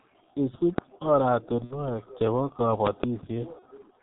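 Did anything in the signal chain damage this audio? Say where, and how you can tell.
Yes. The damage comes from three stages: the codec, something in the analogue or driver path, and the network.

The codec is G.723.1 at heavy damage, across the whole clip. The band stops at about 4 kHz, so the speech sounds muffled. Its slow, frame-based voice model, working in 30 ms blocks, leaves the voice hoarse and smears consonants together. That degree of coarseness fits a rate of roughly 6 kbit/s. These traits are present throughout, so they are the codec's signature rather than a local fault.

Loud pops occur at 0.78 to 0.80 s, a single pop about 15 dB above the speech, and at 2.87 to 3.06 s, a pair about 20 dB above it. The speech continues underneath both, which points to an added voltage transient rather than a dropout. The likely cause is a connector, switch, static discharge or driver glitch injecting a step into the signal, which the following circuitry shapes into a thump.

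VoIP packet loss concealed by the speech codec appears at 1.64 to 1.94 s, where about 60 ms of audio is missing, and at 3.59 to 3.65 s, where about 30 ms is missing. At each gap the decoder repeats its last pitch and filter state, and the gain drops frame by frame. This turns the gap into a fading buzzy tone or coloured noise. At 1.64 s the weakened, distorted voice lasts well beyond the 60 ms gap, because each decoded frame builds on the corrupted state before it.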